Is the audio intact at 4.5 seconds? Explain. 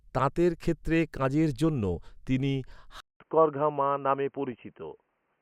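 No. At 4.52 s there is DAB burbling: weak reception let bit errors slip past error correction into the MP2 data, corrupting samples and scale factors so single sub-bands jump in level for up to a frame, across 3 frames, giving a brief burst of burbling.

That moment also falls inside a band-limited stretch from 3.00 s to the end, most likely from the input switching to a poorer device. After "ক্ষেত্রে কাজের জন্য তিনি" a 200 ms silence precedes duller, boxier sound with nothing above 3.1 kHz, a faint new noise floor, and roughly unchanged level.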